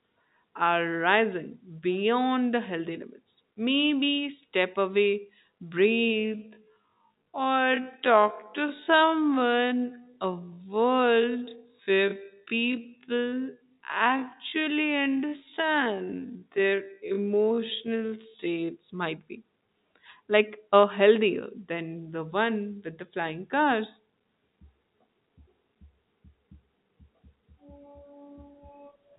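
From 5.84 s, after "step away", to 18.68 s, before "might be", a time-stretched section plays at about 0.53 times normal pace, pitch unchanged, likely from software repeating short segments; the telephone-band audio there drags.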